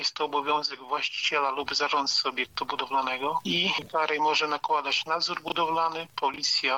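Two brief jumbled moments interrupt the audio, one at 5.48 to 5.52 s and another at 6.34 to 6.38 s. Each is the signature of chunks out of order: a 20 ms block arrived or was written one chunk late, so two neighbouring pieces play swapped. No audio is missing, yet each swap creates three hard joins, and those discontinuities produce the momentary scrambled texture.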